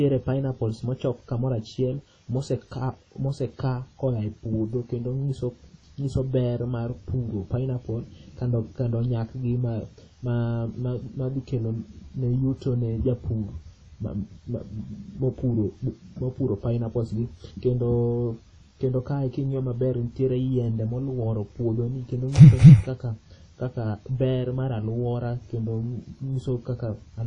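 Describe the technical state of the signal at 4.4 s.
At 4.4 s the speech carries plainly audible transform-codec damage, and it runs through the whole clip. It has a washy, ringing quality. A hiss swells and fades with the speech. Nothing is present above 10.1 kHz. The likely cause is WMA compression at a low bitrate, which fits about 32 kbps. Long transform blocks smear quantisation noise over tens of milliseconds. Weak spectral lines are dropped entirely.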